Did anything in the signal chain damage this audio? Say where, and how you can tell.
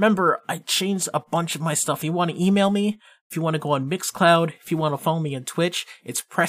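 No, nothing along the chain seems to have damaged this speech, and I can't pick out any point where something went wrong.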